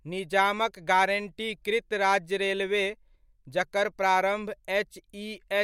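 No technical faults can be heard anywhere in this speech recording.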